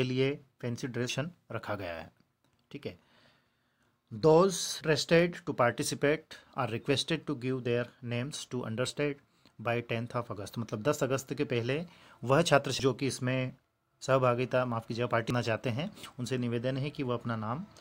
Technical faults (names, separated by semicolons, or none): damaged data in a compressed stream